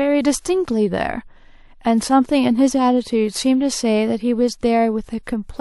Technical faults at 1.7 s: none

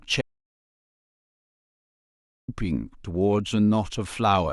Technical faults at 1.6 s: audio dropout to silence

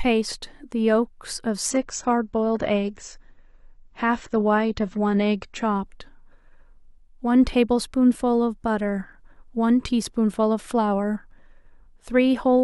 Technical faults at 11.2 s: none

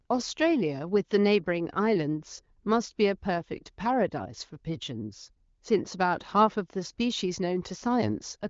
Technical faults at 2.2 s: none

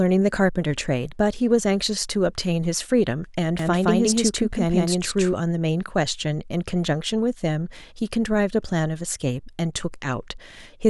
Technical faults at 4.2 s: doubled audio track

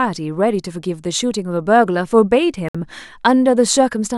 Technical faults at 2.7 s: Bluetooth stall

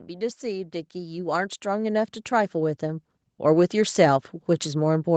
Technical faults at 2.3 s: automatic gain rising

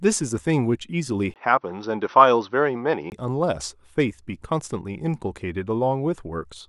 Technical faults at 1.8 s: input switched to a poorer device

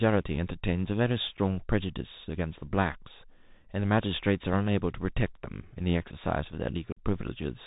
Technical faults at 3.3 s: Bluetooth CVSD headset codec

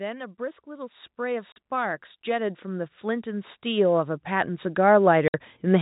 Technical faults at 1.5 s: automatic gain rising; packet loss filled with silence

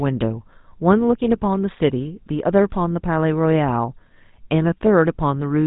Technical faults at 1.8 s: GSM full-rate codec

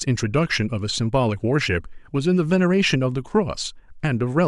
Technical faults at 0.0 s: none

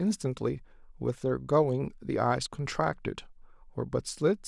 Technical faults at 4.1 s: none

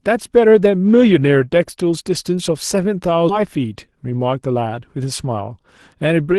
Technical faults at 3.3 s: skip ahead; jitter buffer speed-up

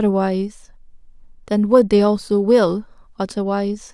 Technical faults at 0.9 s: none

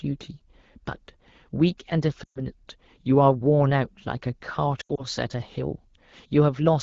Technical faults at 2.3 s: lost AMR speech frames

